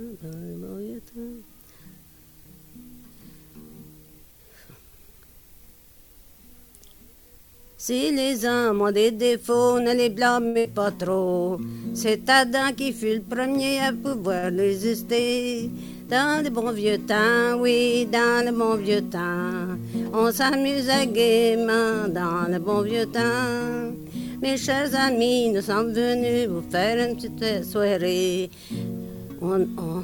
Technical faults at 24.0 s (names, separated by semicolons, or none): none